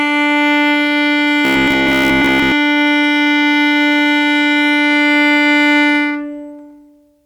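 Robotic sound from repeated short buffers, 1.45 to 2.52 s: a 67 Hz metallic buzz, likely 15 ms slices replayed across most of the span.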